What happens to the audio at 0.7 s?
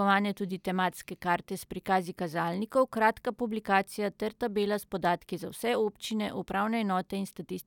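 Nothing goes wrong at 0.7 s; the speech plays through that moment intact.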